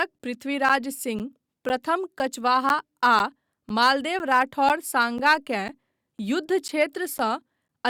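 Regular ticks every 0.5 s from 0.19 to 7.69 s are periodic USB or driver dropouts, each losing about 10 ms of speech to silence.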